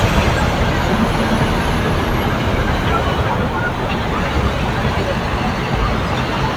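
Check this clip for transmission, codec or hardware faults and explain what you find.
Nothing faulty can be heard anywhere in this audio.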